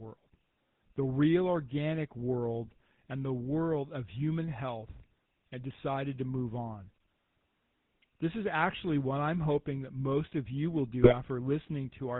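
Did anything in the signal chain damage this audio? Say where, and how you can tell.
Yes. The codec stage left its mark on the whole clip: this is the GSM full-rate codec. The buzzy, gravelly texture and nothing above 4 kHz fit its pulse-driven vocal-tract model, which keeps only a third of the excitation, consistent with a 13 kbps channel.

There's also a network-side problem: GSM bit errors from 11.02 to 11.15 s, right after "most of you will." The sound breaks into squawky, gargly bursts there. Corrupted filter, pitch and gain values mangled the spectrum and level frame by frame, consistent with about six damaged frames.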